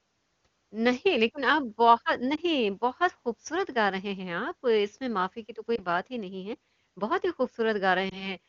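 At 2.36–2.40 s, 5.75–5.81 s and 8.09–8.32 s, lost AMR speech frames make the speech dip and warble instead of dropping to silence or clicking. Each fits a single missing 20 ms frame, bridged by the decoder replaying the last good pitch and vocal tract settings at lowered gain.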